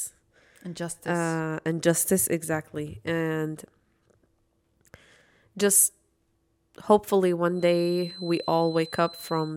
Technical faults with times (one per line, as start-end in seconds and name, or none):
7.52-9.57 feedback whistle